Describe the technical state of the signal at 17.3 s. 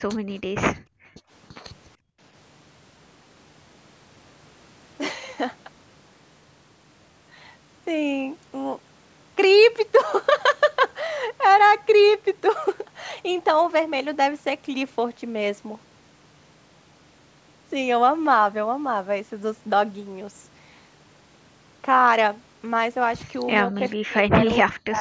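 At 17.3 s the speech signal is intact, with no fault present; the call microphone processing is working as expected there, its high-pass filter trimming the lowest bass and nothing heard above 8 kHz.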